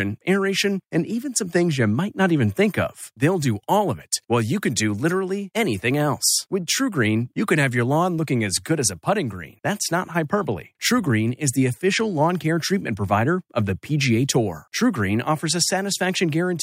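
No technical faults are audible anywhere in the speech.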